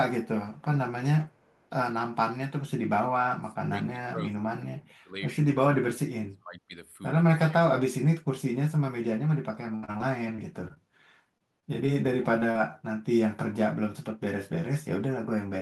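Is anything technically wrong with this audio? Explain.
Yes, the audio has several faults: an echo leak, speech suppressed in double talk, repeated packet loss with a robotic sound, and short concealed packet losses.

Echo leak, 0.58 to 0.62 s and 1.29 to 1.68 s. The far end's echo canceller likely let through part of its loudspeaker pickup, which returned about 355 ms late. A faint delayed copy of the speech, around 40 dB below it, trails the original.

Speech suppressed in double talk, 3.27 to 5.16 s, 5.76 to 6.75 s and 7.44 to 7.57 s. While both sides spoke, the echo canceller likely mistook the talker for echo and attenuated everything. The speech drops sharply, by roughly 30 to 35 dB in the first two stretches and by about 10 dB in the third.

Repeated packet loss (robotic sound), 9.75 to 10.78 s. Audio kept arriving too late or not at all, roughly a fifth of the span. Each gap, the longest 73 ms, was patched by extending the previous sound, giving choppy speech with pieces missing.

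Short concealed packet loss at 11.38 to 11.42 s, 11.60 to 11.64 s, 11.86 to 11.90 s, 12.40 to 12.43 s and 12.51 to 12.57 s. In each, 20 to 40 ms of audio never reached the decoder in time. The receiver continued the preceding sound to fill the hole, leaving a brief smear or wobble.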